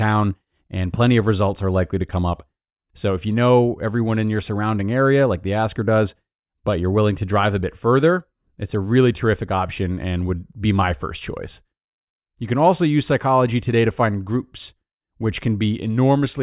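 No technical faults can be heard anywhere in this speech recording. There is nothing that calls for a timestamp or an account of something going wrong.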